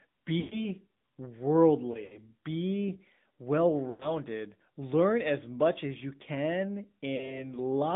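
This speech clip passed through the AMR narrowband mobile codec. Its vocal-tract model rebuilds the signal at a low bitrate, consistent with the 10.2 kbps mode. The line runs only from about 150 Hz to 3.7 kHz, and the voice has a plainly buzzy, synthetic edge. Lost AMR speech frames failed their checks, so the decoder repeated the last good settings at falling gain. The sound smears and fades at 0.40–0.69 s, at 1.92–2.22 s just before "be well", at 3.90–4.14 s after "be well", and at 7.16–7.49 s after "much as you can", where the dropouts are brief.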